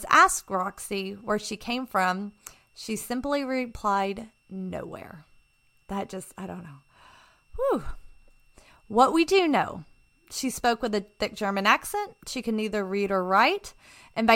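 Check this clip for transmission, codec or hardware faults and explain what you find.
One hardware fault runs through the whole speech clip. A switching supply whistle sits faint underneath, a thin tone near 2.71 kHz wandering slightly, from a power supply cycling audibly, roughly 45 dB down.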